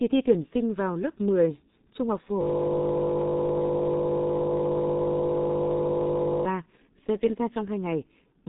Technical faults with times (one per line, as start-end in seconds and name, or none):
0.00-8.48 G.723.1 codec
2.41-6.45 system hang loop